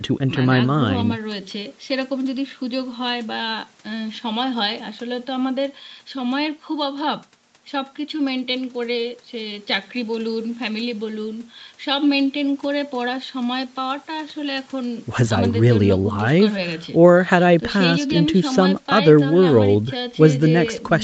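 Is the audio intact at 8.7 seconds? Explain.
Yes, at 8.7 seconds the speech runs on without any dropout, glitch or distortion.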